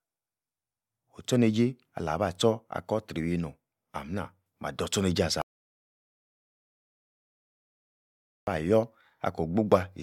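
Partway through this speech recording, at 5.42 s, the sound cuts off abruptly and falls to complete silence, with no room tone or background hiss, until it snaps back in mid-flow at 8.47 s. That is an audio dropout to silence lasting about 3.06 s, and whatever was said in that stretch is simply gone. The likely cause is a loss of the input signal, such as a disconnected device, a failed link or a stray mute, while the recorder kept writing silence.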